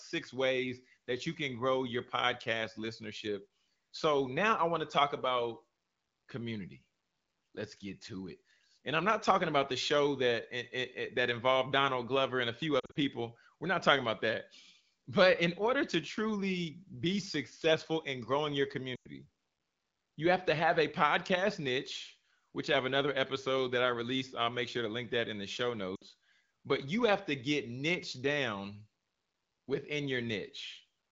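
Lost AMR speech frames at 12.79 to 12.97 s (120 ms scattered over 160 ms), 18.96 to 19.08 s (100 ms) and 25.96 to 26.03 s (60 ms). The wideband decoder replays the last good frame at falling gain, so each gap smears, then sinks toward near silence, unlike the abrupt cut of a plain dropout.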